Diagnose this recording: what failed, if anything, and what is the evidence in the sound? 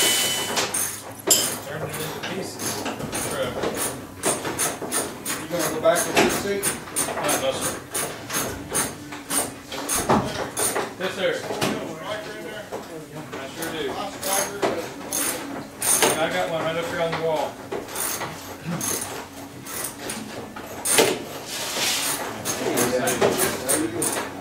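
Nothing in the audio points to a failure at any stage of the chain, from wiring and conversion through processing, transmission, storage and playback.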